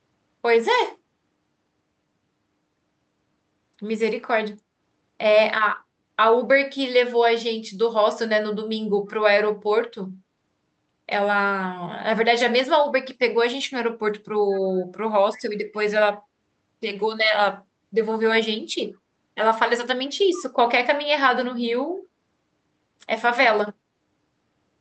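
Echo leak at 14.54 to 14.59 s and again at 15.34 to 15.42 s: a faint, delayed copy of the speech surfaces about 131 ms behind the original, roughly 25 dB down, in two brief scraps. The likely cause is a far-end loudspeaker whose sound reached that side's microphone and slipped past its echo canceller, so the residue was sent back into the band-limited call audio.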